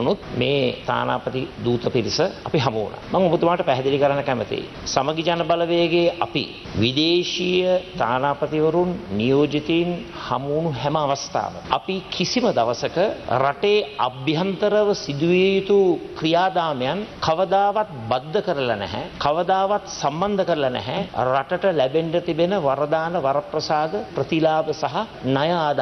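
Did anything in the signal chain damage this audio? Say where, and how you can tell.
No, nothing in the signal chain audibly damaged this audio, and every stage from capture to playback leaves the signal intact.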